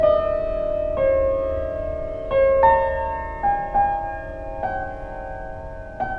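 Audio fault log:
Throughout: wrong sample rate. The music runs fast and sits high, at 1.38 times normal speed and about 5.6 semitones sharp, with tempo and pitch shifted together. That fits audio recorded at 16 kHz being played back at 22 kHz without conversion.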